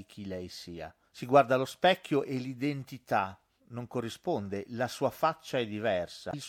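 Near the very end, from 6.29 to 6.34 s, the compressed stream carries damaged data: a short run of bytes no longer forms valid frames, so the decoder misreads what it finds there, loses its place and hunts for the next frame header before it can carry on. For roughly 50 ms the speech gives way to a brief chirp, squawk, click or short hole, before normal decoding resumes.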